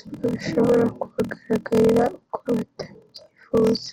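Throughout, a block size mismatch (padded) inserts zero-filled gaps, giving a 41.7 Hz buzz, consistent with 1024-sample writes; the speech runs at 0.889 speed, timbre unchanged.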